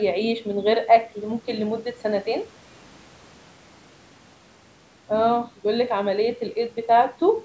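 Nothing in the speech signal registers as a fault; it carries the ordinary shaping of call microphone processing, with the lowest bass trimmed away and no content above 8 kHz.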